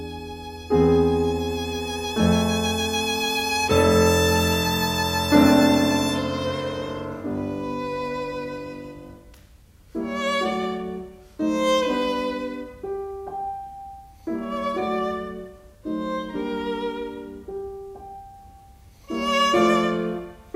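No technical fault can be heard anywhere in this audio. Nothing in it stands out as a processing or transmission problem.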